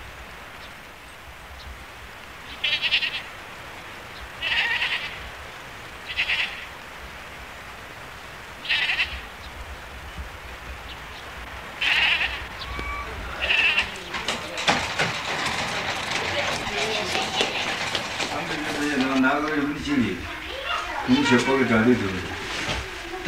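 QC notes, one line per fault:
11.79–11.96 s, loose connector crackle: a worn or dirty contact rapidly makes and breaks the line for about 0.17 s, chopping the sound into an irregular scratchy burst. Its ragged, uneven spacing sets it apart from the brief clean gaps of digital dropouts.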